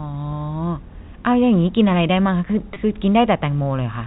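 A brief, slightly held and buzzy sound breaks into this telephone-band speech at 2.74 to 2.76 s, where about 20 ms of audio drops out, which fits a single lost packet. This is packet loss with pitch repetition: the receiver bridged the gap by repeating the last pitch period and fading it, so the hole is filled with a short, static tone rather than silence. The G.711 telephone coding keeps everything below 4 kHz.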